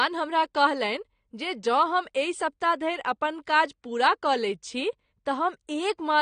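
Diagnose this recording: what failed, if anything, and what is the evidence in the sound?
The speech sounds dull from start to finish, with plainly audible codec damage and nothing at all above 9.6 kHz. This points to the codec stage, most likely AAC compression, which fits AAC-LC at a low bitrate around 32 kbps. At that rate the encoder lacks the bits to code the whole spectrum, so it lowers the cut-off and either leaves gaps in the bands it keeps or fills them with substitute noise.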